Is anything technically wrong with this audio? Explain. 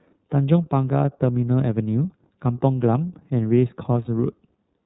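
Yes. The whole speech clip runs through the iLBC codec, and one short dropout occurs near the end.

The iLBC codec coding is plainly audible throughout. Nothing above 4 kHz survives, so the speech sounds narrowband and dull. Each frame's excitation is coded independently, leaving a rough, slightly synthetic texture. The character fits iLBC's 13.33 kbps mode with 30 ms frames.

Lost iLBC frames cause a brief fault from 4.05 to 4.08 s. About 30 ms of audio, likely a single lost frame, is missing. The decoder fills the gap by repeating the last pitch cycle mixed with noise, so it sounds like a short, faintly buzzy held vowel. Clean sound returns almost immediately because iLBC frames do not depend on each other.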